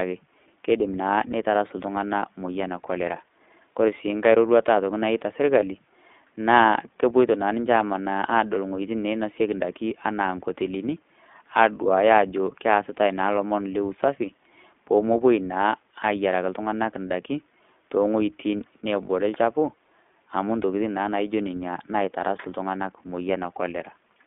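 Throughout, the speech is carried by the iLBC codec. The band runs only from 200 Hz to 3.6 kHz, and the voice sounds plainly rough and synthetic, which fits iLBC's 20 ms frames at 15.2 kbps.

At 5.60 to 5.64 s, one lost iLBC frame, about 20 ms, is concealed by repeating the last pitch cycle. It is a brief buzzy hold, and the voice then recovers at once.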